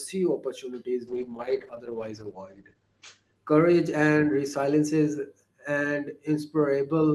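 From about 1.09 s to 5.39 s the speech goes through a call bitrate drop. The bandwidth estimate sagged and the encoder got squeezed from 32 kbps down to 11 kbps, sitting at that floor for about two seconds. At that rate the top end gets chopped, with the audio band narrowing from 20 kHz to 8 kHz. So the voice turns muffled and watery and rough, then opens back up once the bits return.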